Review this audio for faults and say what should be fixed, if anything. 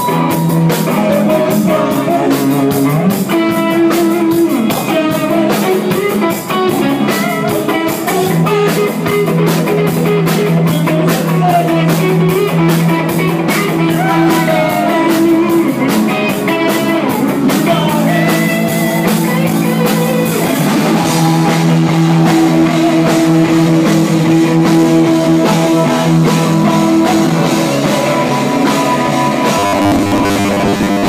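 From 29.59 s to the end at 31.08 s, robotic sound from repeated short buffers: a rigid 100 Hz buzz, likely from a 10 ms block replayed for most of that stretch while fresh audio went missing. Fix it with a larger input buffer or a higher processing-thread priority so new audio always arrives before the old block runs out.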